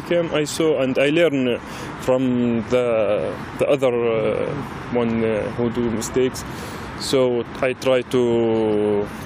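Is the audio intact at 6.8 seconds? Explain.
Yes, at 6.8 seconds the audio is intact, with no dropout, click, distortion or other fault at that point.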